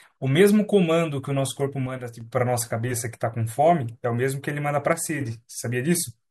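A speech recording in which the level twice sinks abruptly by about 6 dB and then recovers just as suddenly, first from 1.86 to 2.21 s and again from 4.93 to 5.21 s. Each dip is brief and flat-bottomed, with no fade in or out. The likely cause is one channel dropping out: with one side of the stereo pair gone, the mono sum keeps only half of the shared signal, giving that sudden 6 dB drop.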